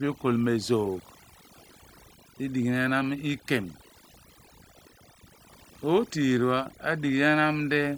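A short speech recording with overdone noise removal running through its whole length. The reduction was set far too aggressively for the noise floor, so individual frequency bands that sit close to the estimated noise level are pulled down hard or gated out entirely, and the quieter components of the voice are removed along with them. Between phrases the background drops and breaks up into twinkling specks.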